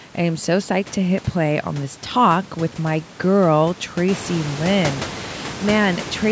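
No technical faults; the call microphone processing limits the band to 8 kHz and trims the lowest bass as designed, and the room noise rises by about 11 dB at around 4 s but stays about 13 dB below the speech.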